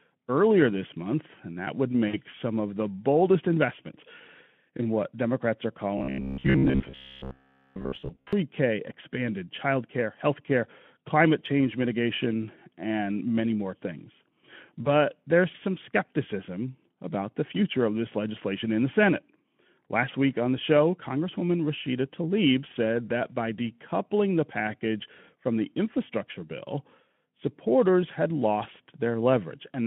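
Speech over a narrowband line of about 150 Hz to 3.4 kHz, with the light hoarseness of a Speex-style codec, carries two bursts of VoIP packet loss concealed by the speech codec. At 2.07 to 2.18 s, between "month and that would" and "some of the boldest", about 60 ms of audio went missing, which fits three 20 ms frames. The decoder bridged the gap by extending its last pitch and spectral shape at falling gain, so the sound smears into a brief buzzy tone or coloured noise that fades, and stays weak or distorted as normal packets resume. At 14.84 to 14.91 s, between "and many more things" and "there's some skepticism about", a shorter loss of about 20 ms, consistent with a single frame, leaves a quicker version of the same smear. From 5.97 to 8.33 s there is robotic sound from repeated short buffers, likely caused by audio arriving too rarely for playback, so the software looped the most recent 15 ms chunk while fresh audio was dropped. 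Most of that stretch, around two thirds or more, is repetition. The 15 ms loop imposes a fixed 66.7 Hz buzz, making the sound metallic and rigid while its rough outline still comes through.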